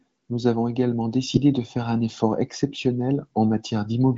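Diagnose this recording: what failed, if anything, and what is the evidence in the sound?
Nothing failed: the speech carries the wideband signature of the AMR wideband (HD Voice) codec, with nothing above about 7.6 kHz and at most faint coding texture, which points to one of its higher rates, around 18.25 kbit/s.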